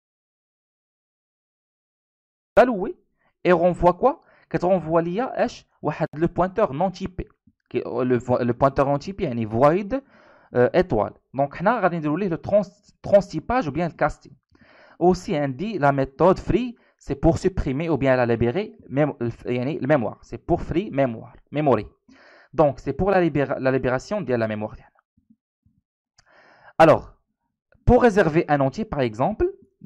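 Audio dropout to silence runs from the very start to 2.57 s: the opening is silent, with no room tone at all, until the sound begins abruptly mid-flow. The input was likely lost or muted while recording continued, so anything before 2.57 s is gone.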